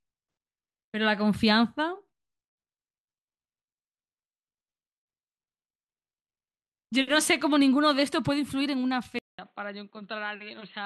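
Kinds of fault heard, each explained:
Input likely switched to a poorer device: after a 200 ms gap at 9.19 s, the speech turns dull and quieter, with nothing above 4.3 kHz.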